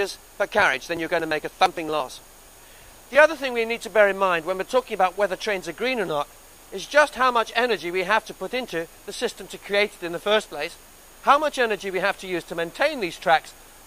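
Periodic USB or driver dropouts run from 0.16 s to 3.27 s, repeating every 0.115 s, around thirty in all. Something on the system is stalling the USB bus or audio driver on a fixed cycle, and each stall skips a brief slice of audio, roughly 10 ms, rather than padding it with silence. The splices land as evenly spaced ticks, a steady rapid clicking that rides on the sound only while signal is present.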